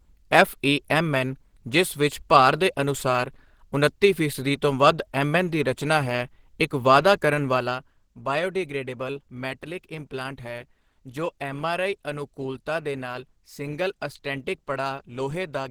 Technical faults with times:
0.00-15.71 Opus compression

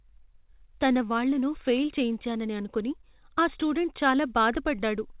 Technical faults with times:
none

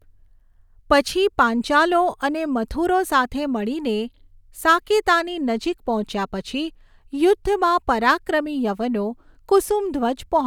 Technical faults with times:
none

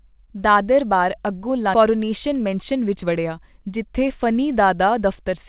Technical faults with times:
1.74-1.76 skip ahead
1.84-3.12 jitter buffer speed-up

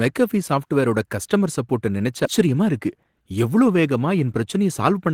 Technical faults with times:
2.25-2.27 skip ahead
2.39-3.31 jitter buffer speed-up

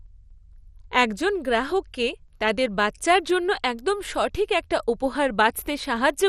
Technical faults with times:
0.00-6.29 MP2 compression

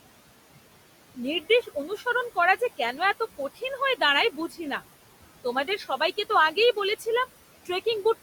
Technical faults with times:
0.00-8.22 noise suppressor artifacts
1.41-2.03 speech cut by the noise suppressor
4.31-4.60 speech cut by the noise suppressor
5.67-6.01 speech cut by the noise suppressor

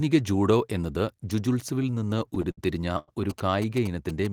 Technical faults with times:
1.82-3.10 repeated stalls (stutter)
3.30-4.32 GSM signalling bursts

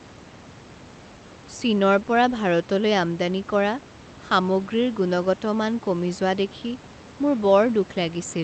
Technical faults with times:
none

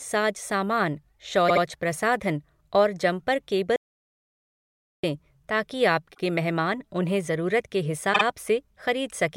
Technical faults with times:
1.48-1.62 repeated frames
3.76-5.03 audio dropout to silence
6.13-6.21 repeated frames
8.12-8.22 repeated frames

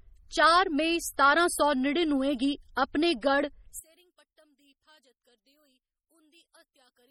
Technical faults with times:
0.00-7.10 MP3 compression
3.79-7.10 one channel inverted

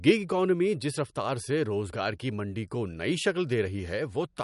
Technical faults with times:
0.00-4.43 MP3 compression

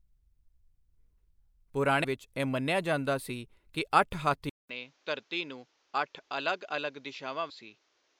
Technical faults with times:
2.03 compressed frames skipped
4.49-8.20 input switched to a poorer device
7.49 compressed frames skipped

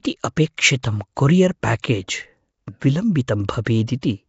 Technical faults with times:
0.00-4.29 Nellymoser compression
1.82 pre-echo

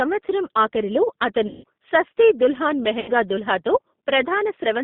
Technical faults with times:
0.00-4.84 G.729 codec
1.47-1.64 VoIP packet loss concealed by the speech codec
3.00-3.14 VoIP packet loss concealed by the speech codec

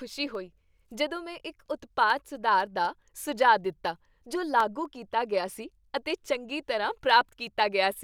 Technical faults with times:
0.10-7.85 periodic USB or driver dropouts

